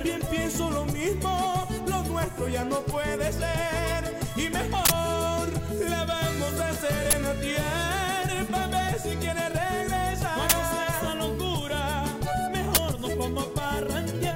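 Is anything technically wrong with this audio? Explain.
Yes. An uninitialised buffer fault occurs four times: 4.85 to 4.90 s, then 7.11 to 7.13 s, 10.50 to 10.52 s and 12.75 to 12.77 s. Blocks played before audio was written to them, so leftover memory became samples, heard as sudden, loud bursts of digital noise. The lengths, about 46 ms then 23 ms, fit 2048- and 1024-sample blocks.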